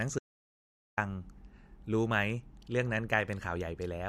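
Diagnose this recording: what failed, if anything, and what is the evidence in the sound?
Audio dropout to silence from 0.19 to 0.97 s: the speech cuts off mid-flow and about 0.79 s of dead silence follows, with no room tone underneath. The likely culprit is the input side, a lost device or link, while the recorder kept writing silence.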